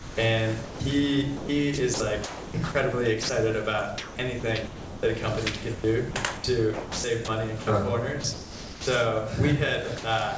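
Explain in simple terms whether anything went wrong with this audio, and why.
Sound chopped by the voice detector occurs from 0.0 to 0.8 s, 1.37 to 3.29 s, 3.98 to 5.03 s, 5.75 to 7.67 s and 8.21 to 8.87 s. Within each stretch, the sound keeps cutting in and out. Pieces of it (about a third of a second in the first stretch, and just over half a second in each of the others) are swapped for a soft, steady hiss. The likely cause is a detector at the sending end that decides moment by moment whether there is sound worth sending. It misjudged quieter parts as background and filled them with artificial comfort noise.

Sound dropped by the voice detector happens once, from 9.98 to 10.04 s. For a brief 60 ms, the sound disappears and a steady hiss takes its place, then the sound returns. This is likely the same detector briefly mistaking a quiet moment for background and pausing transmission. 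The listener's end filled the gap with comfort noise until sending resumed. The clip also travelled over a call connection that leaves nothing above 8 kHz, which gives it a muffled top.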